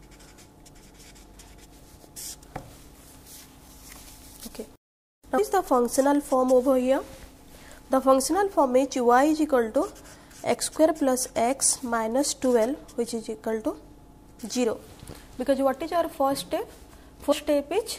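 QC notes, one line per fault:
2.16 s, 5.37 s, 17.31 s: compressed frames skipped. The sound jumps ahead by roughly 150, 200 and 100 ms, consistent with several whole 26.1 ms frames dropping out. Overlapping frames smear each join into a brief blip. On a spectrogram, content shifts abruptly, with a short broadband smudge and no sharp vertical click line.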